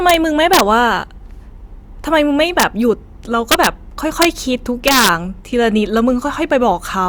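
Violent cracks break through loud moments of this speech clip at 0.10–0.14, 0.53–0.60, 2.60–2.63, 3.52–3.67, 4.22–4.25 and 4.88–5.09 s. This is integer overflow: peaks pushed up to about 3 dB past full scale wrapped to the opposite sign instead of being limited.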